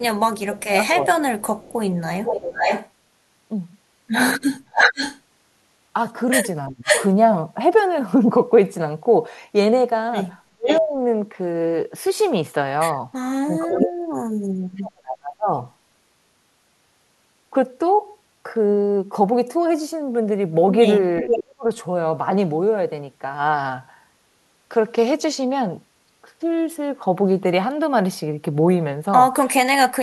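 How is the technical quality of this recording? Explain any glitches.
The recording has real problems, with two recurring echo-canceller faults that tangle together in places.

Speech suppressed in double talk shows up at 0.0–1.49 s, 6.69–6.9 s, 10.5–15.48 s, 21.23–21.66 s and 29.67 s to the end. The speech sinks sharply, anywhere from about 20 to about 40 dB down, sometimes vanishing in chunks. The likely cause is both ends talking at once, so the canceller couldn't tell the near talker from loudspeaker echo and ducked everything.

Echo leak runs from 1.58 to 7.07 s, 10.67 to 13.92 s and briefly at 21.23–21.37 s. You hear a second copy of the speech trailing 498 ms behind, roughly as loud as the original in the first and last stretches and noticeably quieter in the middle one. That's likely a loudspeaker on the far end whose canceller didn't fully scrub its mic pickup, sending the leftovers back.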